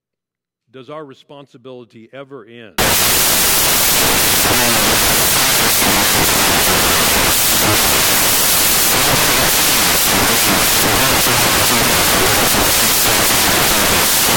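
Samples built from the wrong bytes take over at 2.78 s, right after "does our responsibility ever", and last to the end. The bytes are joined misaligned or swapped, so the fast-changing low bits dominate, turning the speech into loud, harsh broadband noise.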